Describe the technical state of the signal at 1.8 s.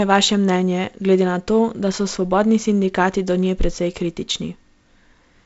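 At 1.8 s the speech is intact, with no fault, only the expected wideband telephone band limit from the G.722 coding, with nothing above about 7.7 kHz.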